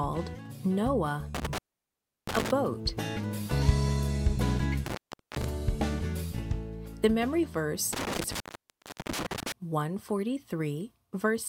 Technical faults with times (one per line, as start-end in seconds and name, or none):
1.35-2.51 intermittent contact
4.86-5.44 intermittent contact
7.93-9.52 intermittent contact